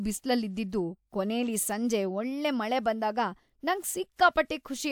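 No technical faults are audible.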